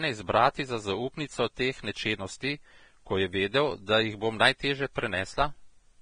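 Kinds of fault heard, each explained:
Vorbis compression: The speech sounds hissy and grainy throughout, with nothing above 9.7 kHz, and consonant onsets come across smeared rather than crisp. That's most likely a heavily squeezed Vorbis encode, probably one that fits a low bitrate around 24 kbps. At that level the encoder drops the top of the band and quantises the remaining treble so coarsely that the fine detail turns into noise of similar energy, which is exactly the rough, fizzy texture here.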